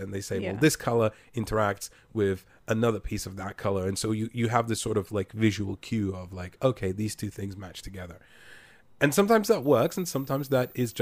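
A switching supply whistle enters at 9.62 s, just after "and sometimes that", and continues to 11.02 s. A switching power supply has dropped into an audible burst mode or is beating with another supply, so the result falls within hearing range. The result is a thin, high whistle wandering between about 14.3 and 14.45 kHz. It sits roughly 25 dB below the speech.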